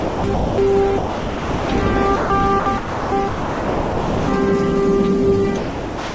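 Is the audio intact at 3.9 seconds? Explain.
No. From 3.28 to 4.28 s the sound is replaced by a full second of steady, low-level hiss, and the original returns at the end. This is likely sound dropped by the voice detector: the sender judged that stretch to be background, stopped transmitting, and the receiver filled the gap with synthetic comfort noise. On a waveform the envelope collapses to a thin, even band; on a spectrogram the structure gives way to steady, featureless noise up to the call codec's 8 kHz ceiling.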